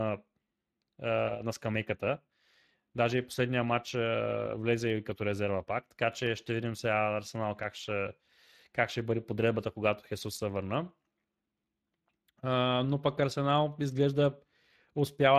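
Throughout, Speex codec damage leaves the speech audibly hoarse and noisy, pointing to a bitrate near 22 kbps; a spectrogram shows smeared, noise-filled upper bands ending near 15.3 kHz.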